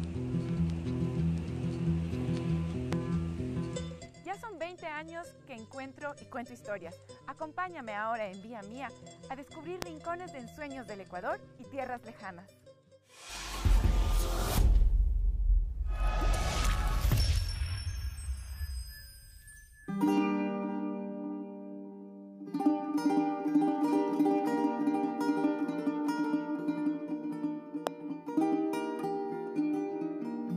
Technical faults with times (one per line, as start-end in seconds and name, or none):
2.93-2.95 loud pop
9.82-9.84 loud pop
27.87-27.89 loud pop